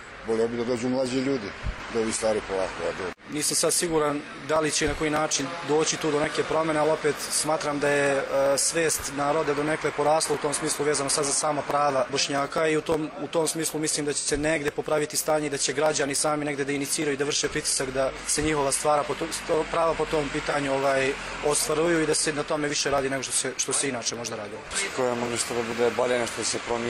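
AAC frame loss with concealment occurs three times: at 14.13 to 14.28 s, the gap is about 85 ms, which fits two lost frames, and at 20.49 to 20.55 s and 25.22 to 25.28 s, each gap is about 43 ms, consistent with a single frame. The decoder covers each gap by reusing the last good spectrum with altered phase, so each spot comes out as a brief smeared, noisy or phasey patch rather than a clean dropout.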